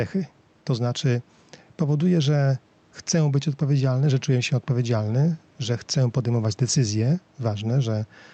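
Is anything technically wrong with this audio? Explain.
Yes. Throughout the clip there is gain pumping. The input gain is likely set far too high, so a fast limiter clamps each loud moment. The faint room noise is about 41 dB below the speech, and the gain swings by roughly 5 dB.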